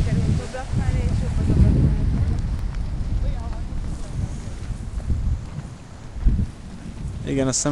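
No technical faults are audible anywhere in this recording.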